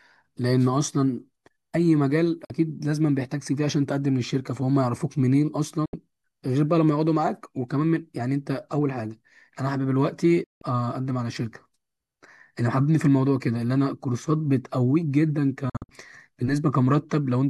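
The speech drops out four times, each a digital broadcast dropout. At 2.45 s about 48 ms vanishes. At 5.86 s a 72 ms hole follows. At 10.44 s the gap stretches to 168 ms. At 15.70 s, 144 ms is lost in short holes scattered over 192 ms, none longer than 48 ms. The receiver muted when frames arrived damaged or not at all. Each cut fades in about 3 ms. The gaps fit whole 24 ms frames going missing.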